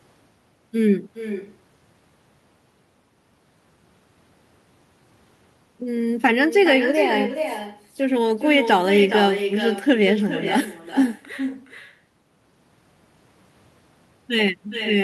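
Echo with no canceller runs through the whole recording. A far-end loudspeaker feeds the microphone, and nothing strips it out. Each phrase returns after roughly 400 ms, at about 9 dB below the speech. The copy sounds quieter and thinner, trailing every line.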